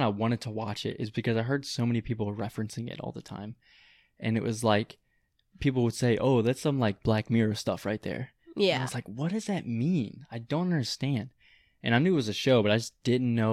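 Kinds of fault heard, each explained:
Nothing stood out on listening to the speech.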